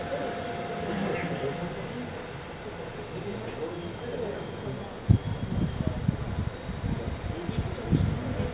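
Nothing goes wrong here; these sounds just come through the call line, where G.711 mu-law coding keeps everything below 4 kHz.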